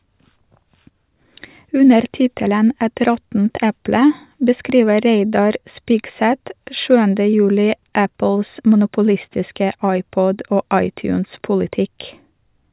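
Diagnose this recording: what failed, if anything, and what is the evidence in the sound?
Nothing in the chain failed: the speech signal stays continuous and steady in level throughout, with no audible sign of trouble from the wiring, conversion, processing, transmission or playback stages.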